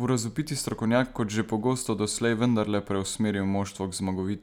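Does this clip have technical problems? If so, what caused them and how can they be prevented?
No technical faults detected.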